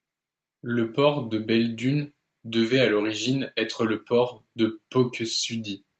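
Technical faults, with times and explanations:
No faults found; the speech passes through the call's microphone processing and Opus call path as expected, with nothing above 8 kHz, consistent with the codec's band limit.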